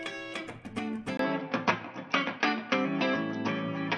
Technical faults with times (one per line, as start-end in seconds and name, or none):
1.17-3.97 input switched to a poorer device